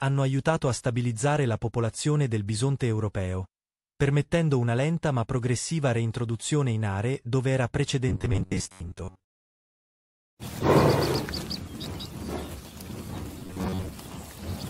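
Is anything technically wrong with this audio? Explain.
Yes. From 8.09 to 9.24 s and again from 13.39 to 13.88 s, the audio turns into a rigid, metallic robotic buzz at 93.8 Hz. This likely comes from repeated short buffers: segments of about 10.7 ms loop in place of roughly half the real audio. On a spectrogram this shows as evenly spaced harmonic lines, and the waveform shows an identical repeating cycle.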